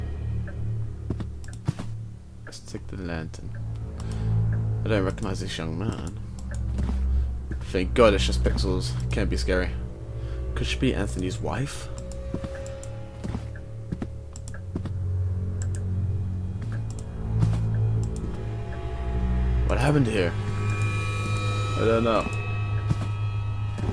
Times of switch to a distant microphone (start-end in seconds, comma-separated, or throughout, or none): none